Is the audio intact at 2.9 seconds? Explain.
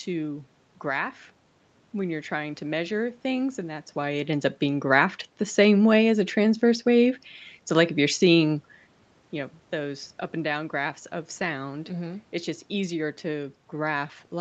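Yes, the audio is intact at 2.9 seconds, with no fault at that moment.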